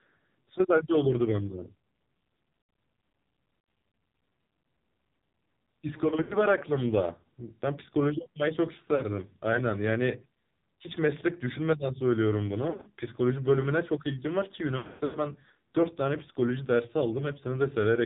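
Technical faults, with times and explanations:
Throughout, AMR narrowband mobile codec: nothing above 4 kHz survives, so the sound is boxed-in and thin. Heavy damage gives a buzzy, synthetic quality, the kind of coarse result expected from a low mode of about 5.9 kbps. The codec rebuilds the sound from a vocal tract model excited by a few pulses every 5 ms. At this bitrate, too few pulses and coarse filter settings can be sent to carry fine detail.
6.22–6.36 s, 8.96–9.05 s, 12.70–12.91 s and 14.78–15.19 s, lost AMR speech frames: damaged frames were replaced by repeating the last good pitch and filter settings at falling gain, so each gap smears into a drawn-out, fading warble. The first two are brief dips of 80 and 40 ms. The last two are scattered losses, with runs up to 100 and 120 ms, where the sound decays toward silence and returns rough.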